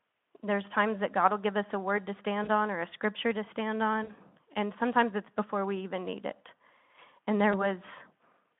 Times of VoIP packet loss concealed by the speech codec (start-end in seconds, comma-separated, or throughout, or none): 2.43-2.48, 4.03-4.13, 7.51-7.67